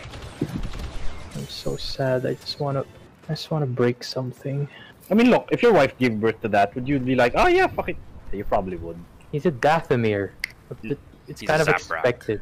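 A single sharp tick at 4.12 s is the one fault in this audio. It is a bit error spike lasting one sample and peaking at about -18 dBFS. One flipped bit threw the sample value off by a power of two before it snapped back. The click is broadband and unrelated to the surrounding sound.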